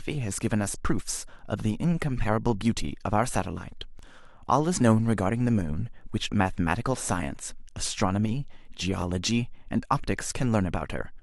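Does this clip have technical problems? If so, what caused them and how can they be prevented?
Yes. The speech has overlapping chunks, heard as a short stutter at 3.99 to 4.02 s and again at 9.02 to 9.04 s. The audio was cut into 5-second chunks, and each new chunk begins about 23 ms before the previous one ended, so that slice plays twice at each join. To prevent it, align the chunk boundaries exactly, or trim or crossfade the overlap when reassembling.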